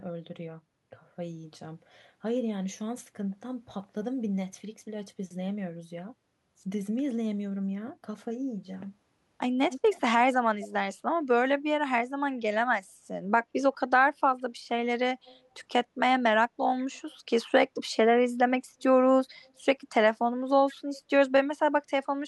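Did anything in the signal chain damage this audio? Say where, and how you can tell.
Yes, in call processing. Echo leak appears at 9.71–10.01, 10.61–10.73, 15.25–15.39, 16.79–17.13 and 20.68–20.72 s as faint copies of the speech trailing 146 ms behind, roughly 15 to 35 dB down. The likely cause is a loudspeaker endpoint whose echo canceller let residual pickup return.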